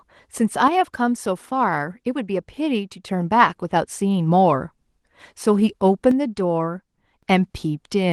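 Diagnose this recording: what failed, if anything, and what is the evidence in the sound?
The speech drops abruptly by about 6 dB from 0.68 to 3.08 s, and again from 6.11 to 7.23 s. Full level returns after each drop. One channel drops out, likely at the analogue wiring. The mono sum then loses half its common signal.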